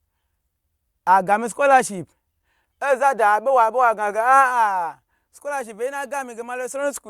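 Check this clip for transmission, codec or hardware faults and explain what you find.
Good news: I listened to the whole speech clip and found nothing worth flagging.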